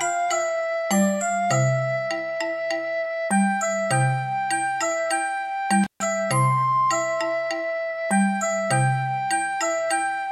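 At 5.83 s the audio suffers an intermittent contact, lasting until about 6.03 s. A loose cable or plug briefly loses its connection, so the signal drops out for roughly 137 ms, with crackle as the contact breaks and remakes and only faint hiss in between. On a waveform this shows as a sudden collapse to near-flat, bracketed by sharp spiky transients; a spectrogram shows a dark gap framed by thin vertical broadband streaks.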